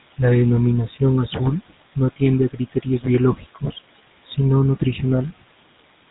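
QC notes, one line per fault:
throughout: noise suppressor artifacts. Steady room noise about 17 dB under the speech is pulled down about 18 dB between phrases, leaving a residue that rises under speech.
throughout: GSM full-rate codec. Pulse-excited vocal-tract modelling, consistent with a 13 kbps GSM full-rate coder, gives plainly audible buzzy roughness, with nothing above 3.8 kHz.
2.52–3.06 s and 3.35–3.78 s: speech cut by the noise suppressor. Quiet speech mistaken for noise drops up to about 17 dB and 12 dB, roughly a fifth of a second each, sounding swallowed.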